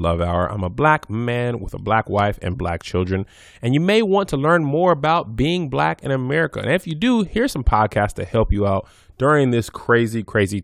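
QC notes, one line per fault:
0.81 to 9.96 s, word clock ticks: about fifteen sharp ticks of uneven strength recur roughly every 0.7 s. The receiving clock runs unlocked, drifting by roughly 30 ppm. Each slip drops or repeats a single sample, producing a tick.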